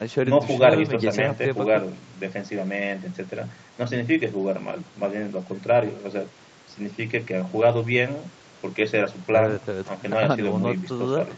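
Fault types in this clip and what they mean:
Nothing stood out on listening to this speech; it sounds like an ordinary call recording, with the content topping out around 8 kHz as the call path's bandwidth allows.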